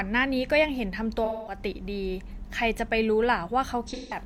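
Speech here, with two spots of AAC frame loss with concealment. From 1.25 to 1.57 s, and again from 3.88 to 4.17 s near the end, the sound turns smeared and noisy, because the decoder is patching over missing frames by reusing the last good spectrum. The gaps run about 213 ms and 171 ms, which fits roughly five and four lost AAC frames respectively.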